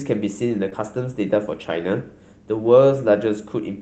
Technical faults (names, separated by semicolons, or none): short concealed packet loss